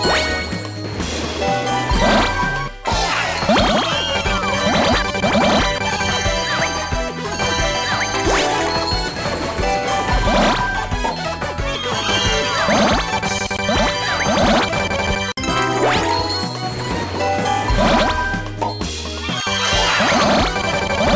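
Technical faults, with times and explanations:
No technical faults can be heard in this audio.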